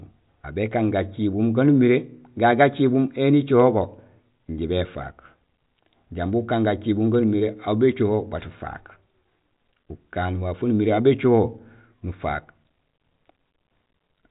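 Nothing stood out on listening to this speech, which carries nothing above about 3.8 kHz, consistent with narrowband G.726 ADPCM telephone coding at a fairly generous rate.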